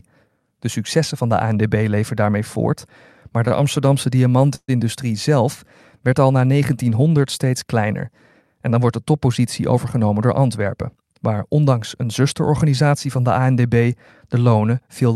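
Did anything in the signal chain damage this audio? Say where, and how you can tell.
Yes, three faults from the network and jitter-buffer stage of a call. At 3.48 to 3.53 s a packet arrived late and the jitter buffer ran dry for a moment. The receiver filled the wait by stretching the last sound for about 24 ms, so a sound is held slightly too long with a slight buzz or dip. Nothing is lost, but this short stall from a late packet pushes everything after it 24 ms later.

At 4.55 to 4.70 s, just before "zelf werd al na", there is a call audio freeze. The last sound carries on as a fading buzz or hiss, then drops to near silence for about 60 ms, about 133 ms of filler in all. The audio then resumes exactly where it stopped, so nothing is missing, but the speech now runs 133 ms later. This was likely packets held up in transit that emptied the jitter buffer.

From 9.6 to 11.03 s, between "dan wordt de" and "waar ondanks een zusterorganisatie", the speech runs about 8 percent fast at its normal pitch. 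This is a jitter buffer speed-up. The buffer held more audio than its target, so the receiver trimmed short pitch-period-sized pieces over and over, removing roughly 150 ms in total. The result sounds hurried while the voice pitch stays the same.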